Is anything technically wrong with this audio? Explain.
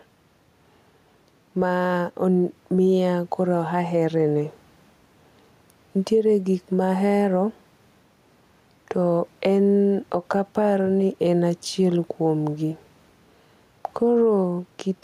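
Yes. Gain pumping runs through the whole recording, with the gain swinging by around 5 dB. The likely cause is an input gain set far too high, with a fast limiter or compressor clamping down on each loud syllable and releasing in the gaps. The room noise sits about 41 dB below the speech, and the speech sounds squashed and flat in dynamics.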